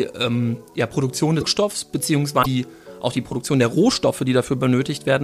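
A broken MP3 bit reservoir, at 1.40–1.43 s and 2.42–2.46 s, makes the audio jump ahead with a brief chirp, burst of noise or short hole. It is likely caused by dropped 26.1 ms frames whose successors fetch borrowed data from the wrong bytes.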